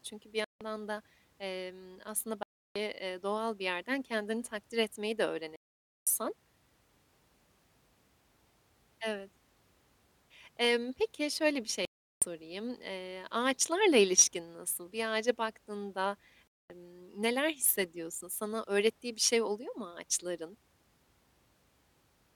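The speech cuts to silence five times: at 0.44 s, before "da emm aslında"; at 2.43 s; at 5.56 s, after "kendini takdir etmeyi de"; at 11.85 s; and at 16.50 s, between "ağaca baktığında" and "neler hissediyorsun". The gaps last 0.16 to 0.51 s. Each is likely a Bluetooth dropout, where late packets were discarded. The sound then resumes mid-flow, as if it had kept playing.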